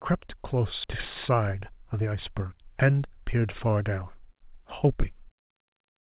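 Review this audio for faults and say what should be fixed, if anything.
At 0.84 to 0.86 s there is a skip ahead. About a second of speech was dropped while later audio was already queued, and the two sides are spliced directly with no fill. On a waveform the envelope changes abruptly at the join, and the spectrogram shows harmonics jumping discontinuously with no silent gap. Preventing this means sizing the jitter buffer to absorb delay bursts so it never overflows and discards queued audio.

From 0.94 to 2.41 s there is a jitter buffer speed-up. The buffer held more than its target, so the receiver repeatedly cut pitch-period-sized pieces, about 150 ms in total, to play at 108% speed with unchanged pitch, making the speech sound hurried. The spectrogram shows harmonic spacing unchanged but syllables slightly compressed in time. The waveform shows periodic cycles of unchanged length, with some whole cycles removed. 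Preventing this means smoothing network delivery or adapting the buffer target more gradually so excess audio is drained gently instead of in a rapid burst. The G.711 call path's band limit at 4 kHz is visible throughout as empty spectrum above that line.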